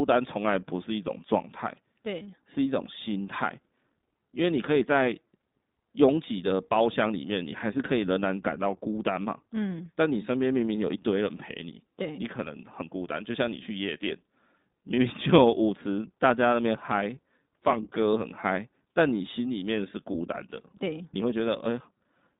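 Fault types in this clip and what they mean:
iLBC codec: Throughout, the speech sounds thin and boxy, confined to roughly 150 Hz to 3.7 kHz, with a plainly rough, synthetic edge. Each 20 ms frame's excitation is coded independently at low rate, which fits iLBC's 15.2 kbps mode.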